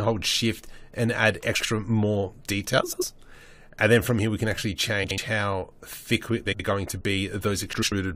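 Frames out of order occur five times: adjacent blocks of audio frames reached the decoder swapped and were played in that order, so each short stretch runs with its two halves exchanged. This happens at 1.55 to 1.66 s (blocks of about 46 ms), 2.82 to 3.03 s (93 ms), 5.03 to 5.18 s (70 ms), 6.45 to 6.60 s (70 ms) and 7.73 to 7.92 s (93 ms). Each swap sounds like a brief garbled flutter. No time is lost.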